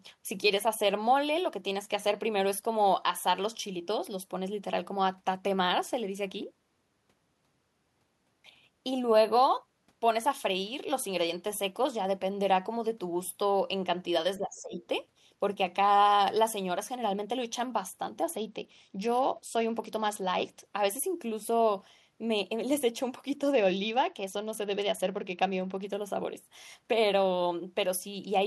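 A speech recording with two faults. From 14.37 to 14.81 s the talker dips by about 15 dB, likely speech suppressed in double talk, where an echo canceller ducked both sides. From 18.23 to 20.65 s and again from 23.52 to 25.87 s the treble turns dull and gritty, a Bluetooth SBC bit pool drop that fits the bit pool falling from 28 to 10, around 84 kbps.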